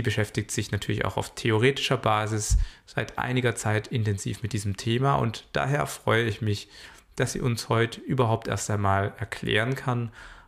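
No technical faults can be heard anywhere in this clip.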